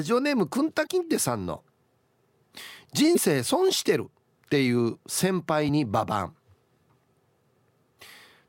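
It's a speech clip with damaged data in the compressed stream: short glitches at 0.83–0.87, 3.13–3.18, 5.65–5.69 and 7.98–8.02 s, each about 40 ms. Corrupted bytes there make the decoder misread frames and lose sync until it finds the next header.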